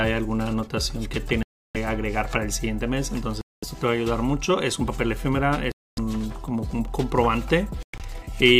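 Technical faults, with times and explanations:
1.43–1.77 s, 3.41–3.64 s, 5.72–5.99 s and 7.83–8.01 s, Bluetooth dropout: abrupt silences, likely from late wireless packets being discarded. The sound resumes further on, as if it had kept playing. The last gap breaks into short holes, the longest about 107 ms.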